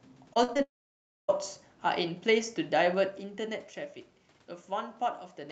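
Speech here, carried over a call link whose audio tops out around 8 kHz, and it has three separate problems. Right at the start, from 0.33 to 0.60 s, you get repeated packet loss (robotic sound): a handful of short holes, the longest about 40 ms, each papered over by stretching the last bit of sound. Roughly a third of that stretch is concealment, so it comes across choppy, with pieces of the speech just gone. Straight after, from 0.62 to 1.30 s, the sound briefly smears into a fading buzz and then drops to near silence for about 0.6 s before the speech resumes with that chunk missing. That's most likely a long network dropout, where nothing arrived for around 0.66 s and the receiver could only extend the last sound for a moment before giving up. Later, between 2.87 and 3.86 s, the level comes down by roughly 10 dB, and you can hear a ticking, zippy texture riding on the speech while it moves. 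That's zipper noise: the gain is being changed in 2 dB jumps with no smoothing in between, about seven times a second, and each jump leaves a small click in the waveform.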